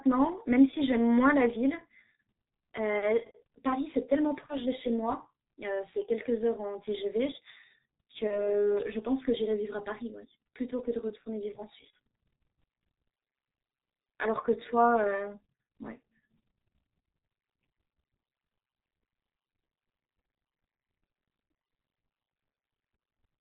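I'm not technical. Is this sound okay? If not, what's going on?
No. The whole recording went through the G.723.1 codec, an old internet-phone format. It cuts out the high tones, so speech sounds muffled and hoarse. VoIP packet loss concealed by the speech codec hits at 4.46 to 4.60 s, 8.27 to 8.60 s and 11.92 s. Bits of sound went missing. The phone guessed the gap, leaving a brief buzzy or fading blur.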